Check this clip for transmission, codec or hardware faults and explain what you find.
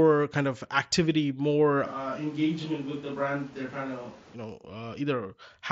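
One fault stands out. From 1.87 to 4.33 s, just after "kind of activity more", the close microphone likely drops out and a distant microphone takes over. The speech turns abruptly roomy and hollow, thinner in the bass, about 5 dB quieter, with room noise roughly 20 dB below it, then snaps back. Throughout, the speech stays within the 8 kHz band of the mSBC headset link.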